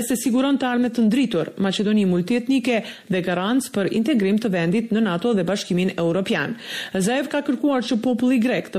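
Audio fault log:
throughout, MP3 compression: The audio has a watery, swirling texture, with metallic chirps fluttering on bright, noisy sounds, plainly audible across the clip. This is likely heavy MP3 encoding, with the damage level pointing to a bitrate around 64 kbps. Short of bits, the encoder drops weaker frequency detail, which then flickers in and out from one frame to the next, producing the swirl and chirps.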